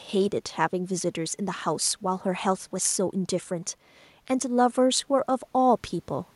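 No technical faults can be heard in this speech recording.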